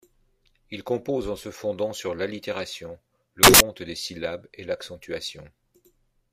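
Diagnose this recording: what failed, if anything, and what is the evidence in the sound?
Samples built from the wrong bytes is what went wrong here, at the sample-format conversion stage. Right after "fondant sur l'allitération le", from 3.43 to 3.60 s, the speech gives way to a burst of loud, harsh broadband noise, then it comes back clean at "des syllabes et". For that stretch the reader put the bytes of each sample together wrongly, so the jittery low-order bits ended up as the big part of every sample and the waveform turned into noise.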